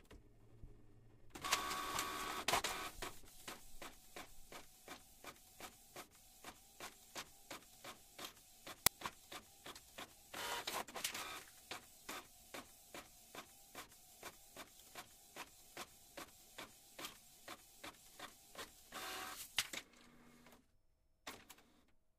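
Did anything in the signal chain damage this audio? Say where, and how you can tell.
Yes. An uninitialised buffer at 8.86 s, in the driver or buffer stage, breaks the sound with a sudden, loud crack lasting about 5.8 ms. Its length and abrupt edges fit a 256-sample block. Playback reached that block before any audio had been written into it, so whatever stale data sat in memory was sent out as samples.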